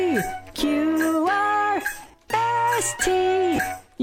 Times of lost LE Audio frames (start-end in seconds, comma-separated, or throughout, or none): 2.03-2.14, 3.56-3.59